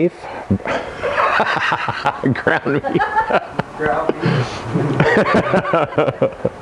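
No dropouts, clicks, distortion or timing faults can be heard anywhere in the clip.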